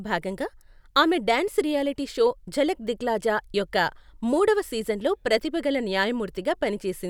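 Nothing technically wrong turns up anywhere in this short bit of speech, so there's no fault to point to and no time or cause to give.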